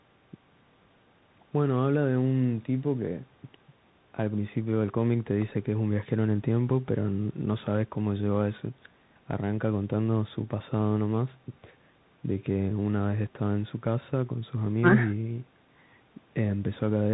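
Bluetooth CVSD headset codec damage is plainly audible throughout the speech. Each sample is coded as one up-or-down bit with an adapting step, so loud high sounds outrun it and distort, s sounds turn scratchy over a granular hiss, and nothing passes above 4 kHz.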